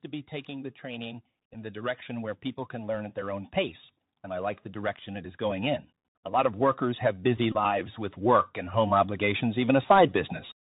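The Bluetooth CVSD headset codec colours the whole clip. The speech is squeezed into a narrow telephone band with nothing above 4 kHz. The character fits CVSD's 64 kbps one-bit stream, where each sample only says up or down and the step size adapts to follow the signal. That damage is plainly audible. Loud, bright sounds outrun the step and distort, sibilants turn scratchy, and a grainy hiss sits beneath the speech throughout.

Automatic gain rising runs from 0.45 s to 10.18 s. The gain control judged the input too quiet and kept turning it up, by about 16 dB across those nine-odd seconds. Because it acts on the whole signal, the speech and the background noise swell together. The clip gets steadily louder and hissier toward its end.

A Bluetooth headset packet repeated at 1.54 s. It is a brief replay of only about 7.5 ms, which points to two lost packets. When voice packets between headset and phone fail, the chip decodes the previous packet's bits again. 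A longer run follows from 7.52 s to 7.56 s, covering 22.5 ms, roughly six packets. There the copy recurs every 3.75 ms and produces a brief buzz near 267 Hz before clean packets resume.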